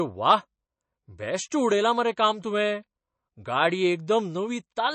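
Speech, with plainly audible MP3 compression throughout: a hard treble ceiling at 8.3 kHz plus a watery, swirling texture that simple filtering wouldn't add, likely from a bitrate near 32 kbps.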